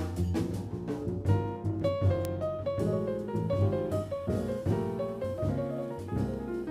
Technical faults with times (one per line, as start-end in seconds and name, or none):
0.43-6.34 word clock ticks